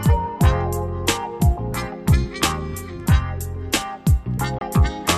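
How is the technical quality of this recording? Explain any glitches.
There is one glitch, a digital broadcast dropout near the end. From 4.58 to 4.62 s the sound mutes abruptly, fading out in about 3 ms, leaving a gap of roughly 24 ms before it resumes. The receiver lost the signal or rejected corrupted data and muted until valid frames returned, and a hole this short is consistent with a single lost frame. It is heard as a brief cut, and whatever was sent during it is lost. A waveform shows a sharp collapse to a flat line, and a spectrogram shows a thin, fully empty vertical band across all frequencies.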